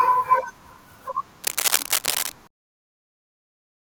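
From 1.43 s to 2.32 s, a burst of dense, uneven scratching and rustling sits over the speech, only a little quieter than the speech itself. This is cable scratch noise. The likely cause is a worn cable, connector or control being moved during recording. Its contact resistance jumps around rapidly as it shifts, and those fluctuations add ragged noise to the signal for just under a second before it settles again.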